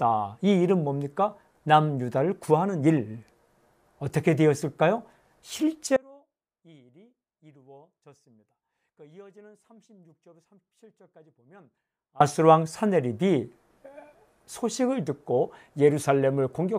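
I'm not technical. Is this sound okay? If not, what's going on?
No. From 5.96 s to 12.2 s, about six seconds, there is an audio dropout to a faint residue. The sound cuts out abruptly in mid-flow, and instead of true silence the gap holds only a faint trace of the sound, far quieter than its normal level. It then returns just as suddenly. This is likely a loss of the main signal somewhere in the chain while the equipment after the break stayed switched on.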